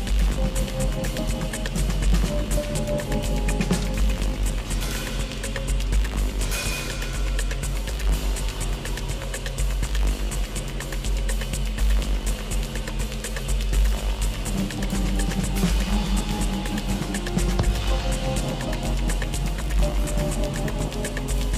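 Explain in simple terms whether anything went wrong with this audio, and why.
Nothing went wrong; I heard no problems here.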